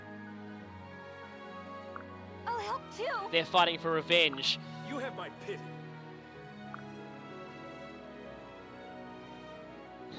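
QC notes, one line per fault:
No faults found; the audio shows normal call microphone processing, with the lowest bass trimmed and nothing above 8 kHz.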